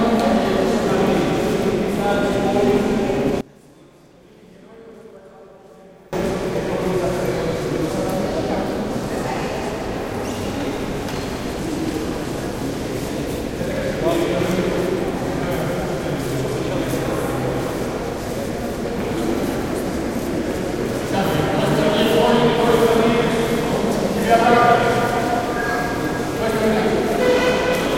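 From 3.41 to 6.13 s the sound drops about 25 dB to a faint residue, likely one channel inverted, cancelling its shared content in mono.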